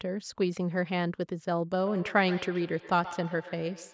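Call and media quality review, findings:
Feedback echo between two devices, 1.77 s to the end at 3.93 s. Speech returns roughly every 150 ms, thinner and ringing, peaking about 13 dB below the direct speech. A second device's speaker is feeding a nearby microphone, and each device's echo canceller ignores the other's playback.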